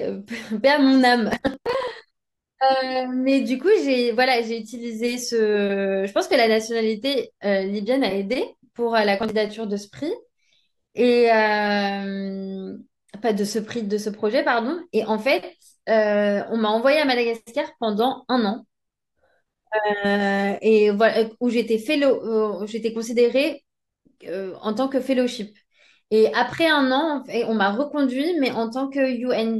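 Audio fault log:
1.31–1.92 s and 9.18–9.31 s: processor overload crackle. The processor falls behind and repeatedly misses the deadline for each small audio buffer, which sounds like buffers of around 10 ms. Each missed buffer is simply skipped, leaving a short silent hole with hard edges. Dozens of these holes in the first stretch, and fewer in the brief second one, merge into a gritty tearing crackle over the speech that clears once the load eases.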